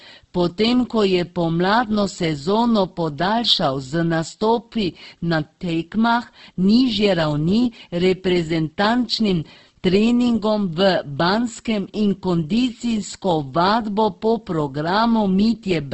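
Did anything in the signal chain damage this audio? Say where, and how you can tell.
Yes. At the sample-format conversion stage, quiet parts of the speech turn gritty all the way through, with grain riding on the signal around 50 dB down. That's likely low bit depth without dither, fitting a 10-bit truncation where small detail gets rounded into stepped error.

The codec stage did heavy damage too. Across the whole clip the speech sounds rough, noisy and grainy, with a wideband top end, which fits Opus compression in CELT mode at a very low rate around 12 kbps, filling starved bands with folded or noise content.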